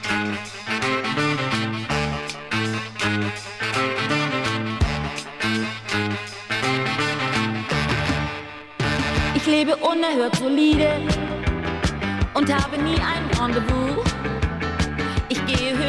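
Nothing in the audio stood out as a technical problem on listening.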